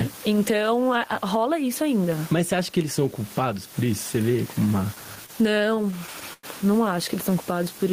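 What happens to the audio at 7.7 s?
At 7.7 s the audio is inside a jitter buffer slow-down that runs from 7.30 s to 7.90 s. The receiver's buffer had run short, so it stretched playback by repeating small pieces of the signal, adding 66 ms across that span. The speech plays at about 90% of its normal rate with pitch unchanged, so the sounds come out drawn out and slightly dragged as the clip ends.

The level is also rising and falling here, as it does throughout the clip. The room noise sits roughly 31 dB below the speech, and the gain swings by around 15 dB. This gain pumping is likely caused by an input gain set far too high, with a fast limiter or compressor pulling it back down on every peak, which squashes the level differences.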